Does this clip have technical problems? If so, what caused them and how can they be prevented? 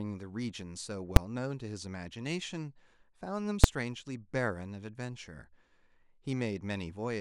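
Yes. Invalid numbers at full scale occur twice in this speech, at 1.16 s and 3.64 s. A calculation produced infinite or invalid values that were clamped to maximum output for a whole block, about 5.3 ms, which fits a 256-sample block. Because the block is so short, each one sounds like a single loud bang. To prevent this, check for and replace invalid values inside the processing before output and guard against division by zero or unstable filter states.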